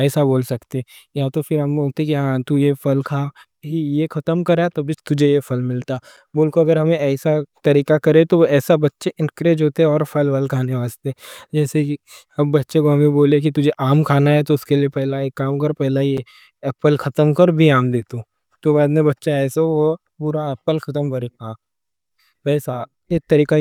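Gap between chunks at 6.17 s and 16.17 s: the speech is split into 10-second chunks, and a hole of about 7 ms opens at each join, interrupting it without losing any of it.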